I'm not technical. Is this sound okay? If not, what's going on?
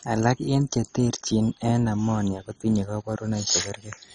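No, it isn't quite right. All the way through, the speech sounds dull and strongly gurgly, with a grainy, watery edge on it. That's most likely MP2 compression squeezed very hard. This format splits the sound into slices by pitch and hands each slice a share of data. With too little to go around, the top slices simply shut off, so there's nothing above about 10.3 kHz. The slices that remain get rough, which causes the bubbling texture.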